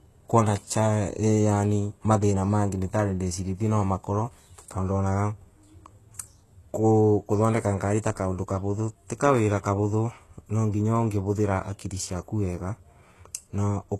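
Throughout, the speech carries HE-AAC compression damage, plainly audible. Treble above about 12.3 kHz is gone. The rest is likely rebuilt by band replication, so s sounds turn gritty and metallic.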